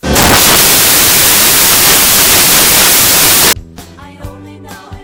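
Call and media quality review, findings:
Samples built from the wrong bytes, 0.00 to 3.53 s: broadband noise replacing the audio. Probable decoder or file reader misassembling bytes (offset by a byte, swapped order, or wrong alignment), so low bits dominate. Spectrogram: energy smeared across the full band. Waveform: dense, noise-like fill.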